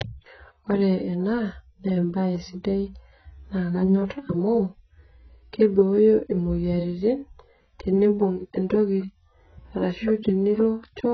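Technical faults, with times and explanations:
Throughout, AAC compression: the speech sounds dull and smeared, with nothing above 6.4 kHz and a watery, warbling texture on sustained vowels and sibilants. This is likely heavy AAC-LC coding at a bitrate around 12 kbps, which quantises the spectrum so coarsely that the coder drops the top band. On a spectrogram there is a hard shelf at 6.4 kHz; the waveform envelope looks normal.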